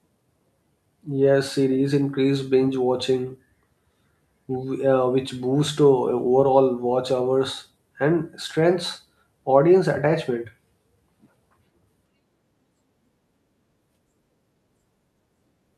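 No faults detected on this speech recording; nothing in the signal path calls for attention.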